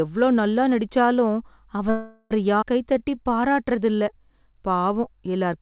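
Right after "எவ்ளோ நல்லா நடிச்சாலும்", at 1.90 s, the speech stops advancing and a call audio freeze sets in until 2.33 s. The receiver holds the last sound as a fading buzz for about 405 ms, with no fall to full silence. The likely cause is packets stalling in transit and the jitter buffer running dry. When delivery resumes, the speech picks up exactly where it stopped. Nothing is lost, but the playout delay is now 405 ms longer.

A skip ahead follows between 2.61 and 2.64 s. Roughly 150 ms of speech is dropped while later audio was already queued, which claws back part of that extra delay. The join is nearly direct, bridged by only about 13 ms of fill, so the speech lurches forward rather than pausing.

From 2.84 to 3.97 s a jitter buffer slow-down stretches the speech by 167 ms, so it plays at 86% of normal speed while keeping its pitch. The buffer rebuilds its reserve by repeating single pitch periods many times over. 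The result is drawn-out sounds. All of this sits on top of the G.711 A-law call path, which is audibly band-limited with nothing above 4 kHz.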